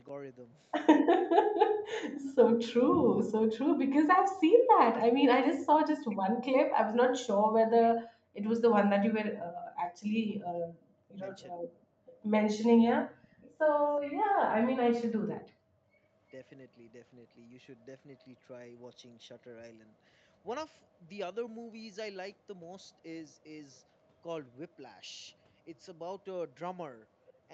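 A faint, delayed copy of the speech surfaces in short scraps at 6.09–6.17 s, 11.12–11.17 s, 12.06–12.16 s, 13.22–13.56 s, 14.0–14.24 s and 27.26–27.32 s, sitting about 25 to 35 dB below the direct sound and trailing it by 372 ms. This is echo leak: the far end's sound likely came out of a loudspeaker, reached the microphone, and slipped past an echo canceller that removed most of it but not all.

At 11.53–11.67 s the speech briefly drops away, by as much as about 40 dB over roughly 150 ms, before recovering. This is speech suppressed in double talk. With both sides sounding at once, the echo canceller likely could not tell the local talker from the returning echo and turned the whole signal down. The talker was lost along with the leak.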